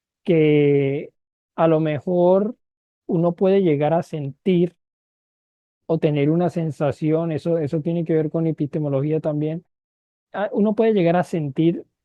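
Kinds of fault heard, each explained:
No faults heard in this speech.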